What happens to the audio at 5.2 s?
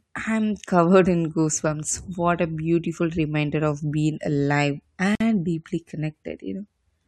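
A gap at a join of encoded pieces, 5.15 to 5.20 s, after "reminder of being alive": untrimmed encoder delay and padding leave a 52 ms gap with smeared edges before the speech resumes.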